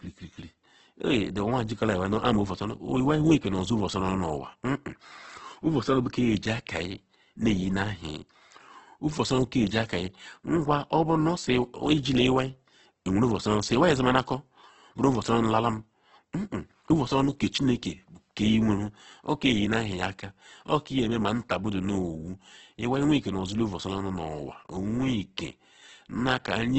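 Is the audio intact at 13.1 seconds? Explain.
No. At 13.1 s, as throughout the clip, the speech carries heavy Opus compression damage, likely from a music-mode encode at a very low bitrate near 12 kbps. Bands are noise-filled, making it rough and grainy, and nothing remains above 8.2 kHz.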